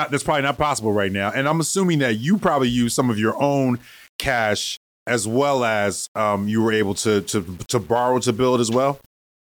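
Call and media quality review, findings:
Low bit depth without dither, whole clip. Grainy, gritty distortion rides on the speech and changes with it. Quiet syllables and decays break up and sputter. Error sits only about 30 dB below the signal. Likely cause: samples rounded to a coarse grid with no dither, which fits an 8-bit stage. Error tracks the waveform, so it sounds like distortion, not steady hiss. Check format conversion in the capture or transcode path.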